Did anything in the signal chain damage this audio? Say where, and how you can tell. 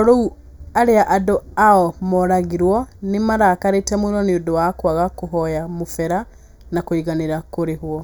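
Yes. Channel delay (comb filtering) runs throughout the speech: one channel lags by roughly 0.2 ms before the mono sum, cutting hollow notches from around 3 kHz upward.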